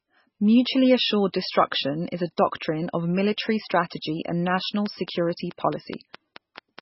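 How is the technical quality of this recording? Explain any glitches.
The recording has two clear faults. Throughout, heavy MP3 compression is the likely cause: a very low bitrate, around 16 kbps, starves the encoder, leaving watery, swirly speech with nothing above 5.6 kHz. From 4.65 to 6.80 s, a train of clicks is likely caused by interference or a faulty connection, adding about ten regular pops, 4.7 per second, roughly 10 dB above the speech.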